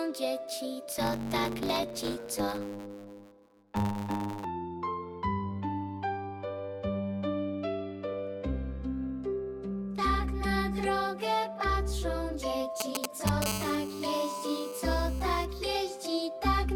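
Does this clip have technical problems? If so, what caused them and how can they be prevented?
Yes. From 0.88 to 4.45 s a 100 Hz buzz runs under audio that hurries along about 1.16 times fast at normal pitch. This is a block size mismatch (truncated): one stage writes longer blocks, which fits 512 samples, than the next reads, and each block's tail is dropped. Matching buffer sizes between stages prevents it.

From 12.80 to 13.44 s a galloping dit-dit-dit of short 217 Hz buzzes appears, roughly as loud as the sound itself. These are GSM signalling bursts from a nearby 2G phone, rectified by the audio circuit. Keeping phones well away from audio gear prevents it.

From 13.46 to 15.45 s a hard, raspy 217 Hz buzz with many harmonics sits about 11 dB below the sound. This is GSM phone buzz from a nearby 2G phone in a call, its 217-per-second transmit bursts rectified by the circuitry. Shielded, properly grounded cabling and distance from phones prevent it.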